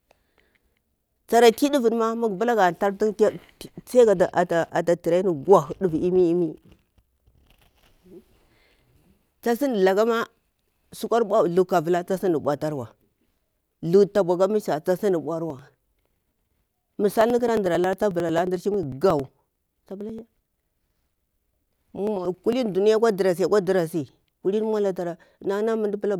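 Speech clip with periodic USB or driver dropouts from 15.50 to 22.53 s, starting just before "duniya akwa ɗarasi". Every 90 ms, roughly 10 ms of audio is skipped outright, producing a steady train of ticks where a blocked bus or driver repeatedly drops samples.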